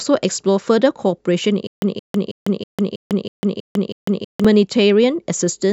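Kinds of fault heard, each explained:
Stutter with silent gaps: from about 1.67 s to 4.45 s the speech gets stuck, with the same short 171 ms fragment coming back eight times, each followed by 150 ms of dead digital silence, so it ticks along at an even 322 ms pace. That's likely a stalled player or stream replaying its last buffered chunk on each retry and then running dry, and whatever should have played during that stretch is simply gone.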